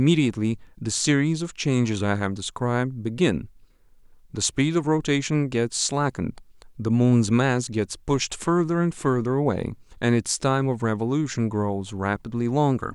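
No technical faults can be heard at any point in the recording.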